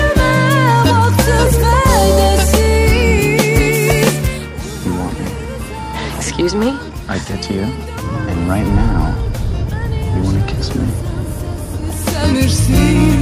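At 1.47 s there is a tiny skip, caused by an overlap between stream segments: two segments, apparently 2.0 s long, claimed the same few milliseconds, and the player discarded sound that was never duplicated. On a waveform it appears as an abrupt discontinuity; a spectrogram shows a thin vertical broadband line.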